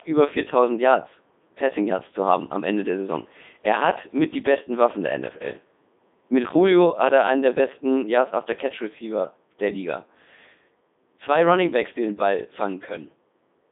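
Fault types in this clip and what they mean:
Codec 2 vocoder: A low-rate codec rebuilds the speech from sine waves. Only pitch, voicing, loudness and spectral shape survive. Here it sounds heavily robotic and buzzy. The band runs 200 Hz to 3.7 kHz, with nothing above 3.8 kHz. This fits a 3.2 kbit/s stream.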